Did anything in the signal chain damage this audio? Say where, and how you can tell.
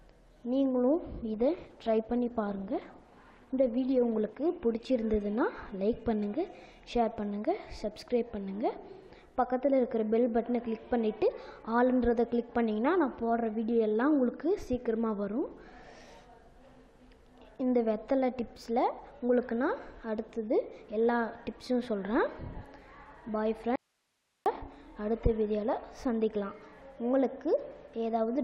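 Yes. From 1.34 to 6.79 s the audio turns rough and dull, worst for about 2.9 s: a call bitrate drop, where a fall in the call's bandwidth estimate pushed the codec from 96 to 14 kbps.

From 23.76 to 24.46 s the sound cuts out abruptly, leaving only hiss about 50 dB down: an audio dropout to a faint residue, likely an upstream signal loss while the later path stayed live.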